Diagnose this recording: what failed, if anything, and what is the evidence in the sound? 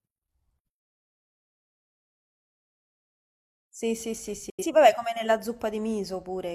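Speech fades out within 3 ms at 4.50 s and returns at 4.65 s: a digital broadcast dropout, the receiver muting what fits two failed frames.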